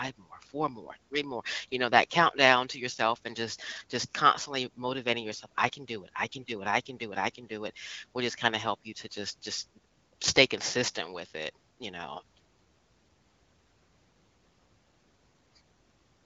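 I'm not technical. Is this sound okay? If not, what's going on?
Yes, nothing stood out as a problem when listening to this speech.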